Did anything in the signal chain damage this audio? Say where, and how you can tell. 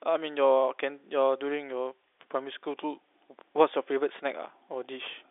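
No, nothing stood out on listening; the speech simply carries the narrow band of ordinary G.711 telephone coding, with nothing heard above roughly 3.8 kHz.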